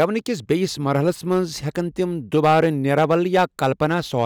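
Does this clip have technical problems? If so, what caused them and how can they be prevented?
Yes. Hard clipping runs throughout the speech: peaks driven about 7 dB past full scale are cut flat, adding crackle on peaks. Lowering input gain prevents it.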